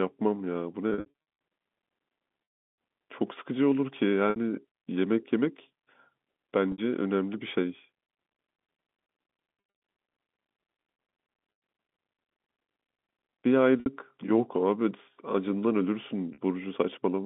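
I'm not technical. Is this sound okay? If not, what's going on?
No. Packet loss with pitch repetition strikes at 0.9, 2.44, 4.3, 6.72, 9.54, 11.52, 13.8 and 16.34 seconds. Lost pieces get patched by repeating the last sound, so you hear a brief buzzy hold, not a clean silent gap. The longest, 2.44 to 2.78 s, fades out.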